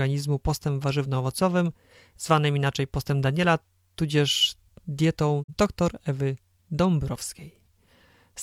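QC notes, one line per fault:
5.42–5.51 s, digital broadcast dropout: the speech fades out over 20 ms into silence, and 42.7 ms of programme is missing before sound resumes at 5.51 s. The receiver muted after losing signal or receiving frames that failed their checksum, which fits a single lost frame.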